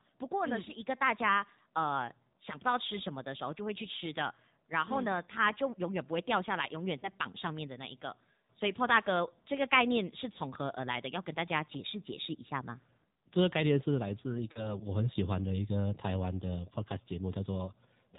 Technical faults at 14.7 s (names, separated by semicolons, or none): AMR narrowband mobile codec; pre-emphasis left on; lost AMR speech frames